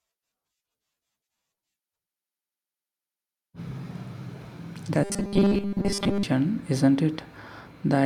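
From 5.04 to 6.23 s the speech turns into robotic sound from repeated short buffers. It becomes a rigid, metallic buzz fixed at 200 Hz. Most of that stretch is repeats. The likely cause is audio arriving too seldom, so a 5 ms slice was looped.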